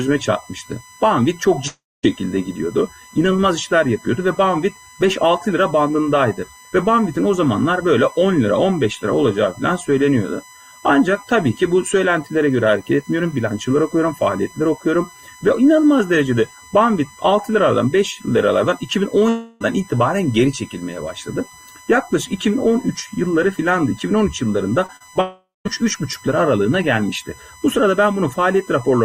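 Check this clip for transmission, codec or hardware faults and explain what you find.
Five faults are audible: a steady USB whine, three long dropouts, and a brief burst of repeated packet loss.

USB whine, throughout the clip: a fixed tone at 1 kHz sits about 25 dB below the programme. The USB bus draws current in 1 ms frames, and that periodic load leaks into the audio through shared power or ground, which produces a constant pitch exactly at the frame rate. It stays put regardless of what the audio is doing.

Long network dropout at 1.67 to 2.05 s, 19.29 to 19.62 s and 25.21 to 25.78 s: in each span the sound smears into a sustained, fading continuation of what came just before. In the first and third, that tail runs out into roughly a quarter and a fifth of a second of silence before the audio resumes. The second is smoothed over completely, with no silence. The likely cause is a stretch where no data arrived, so the receiver extended the last sound until it gave up. 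The audio picks up later with that portion gone.

Repeated packet loss (robotic sound) at 24.86 to 25.17 s: four short holes, the longest 36 ms, are each patched by repeating the last sound, covering about 29% of the span. The rapid patch-gap-patch pattern gives a choppy texture with fragments missing. It runs straight into the third dropout.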